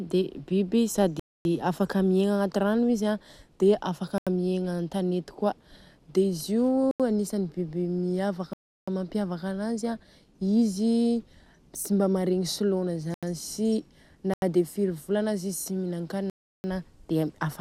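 Speech with seven blocks of digital silence, where the signal drops straight to zero and back. That happens at 1.20 s (256 ms); at 4.18, 6.91, 13.14 and 14.34 s (about 85 ms each, which fits a 4096-sample block); and at 8.53 and 16.30 s (341 ms, four such blocks). It sounds like the output buffer wasn't filled in time.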